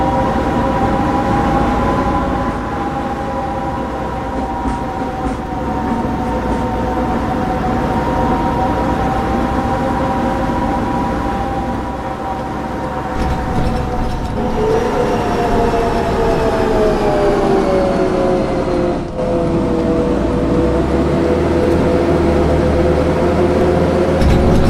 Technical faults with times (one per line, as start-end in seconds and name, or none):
11.75-13.26 overlap-add ripple
20.17-20.43 frames out of order